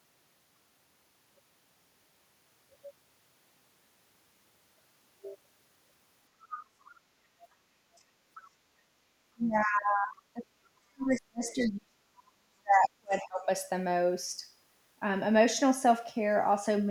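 Faint scraps of a second talker surface behind the speech at 6.41–6.66 s, fairly audible at roughly 15 dB down, then at 6.85–6.91, 7.96–8.02 and 8.34–8.49 s, much quieter (25 to 40 dB down). This is the other side's voice leaking through, likely because the echo canceller left loudspeaker pickup in the microphone signal. From 9.33 to 13.49 s, about four seconds, the main speech sinks and breaks up, dropping by as much as roughly 40 dB. This is speech suppressed in double talk: the canceller likely mistook overlapping talk for echo and turned everything down. Two more brief leaks, at 11.10–11.15 and 11.60–11.67 s, come through inside that stretch at about 25 dB below the speech.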